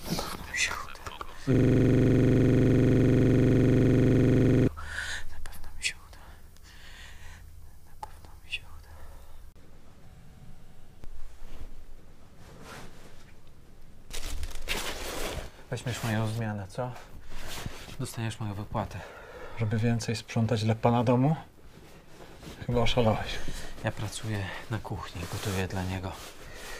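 From 1.55 to 4.68 s a system hang loop replays one 42.67 ms slice around seventy times, fitting a 2048-sample buffer, as the device kept cycling while the system froze. It buzzes at 23.4 Hz; the waveform shows identical repeating blocks and the spectrogram shows evenly spaced vertical stripes.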